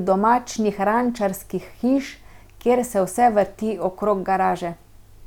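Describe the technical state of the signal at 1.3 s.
The signal at 1.3 s is intact, with no audible fault at that moment.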